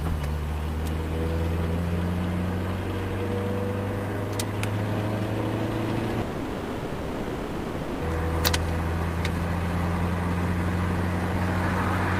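From 6.21 to 8.03 s the sound gives way to a fading buzz-like continuation, then resumes with about 1.8 s missing, likely a long network dropout.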